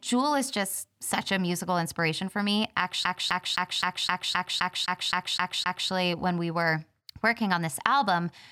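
From 3.05 s to 5.9 s the speech sticks like a skipping CD stuck on one turn. A 260 ms slice repeats eleven times, each jump marked by a brief mute.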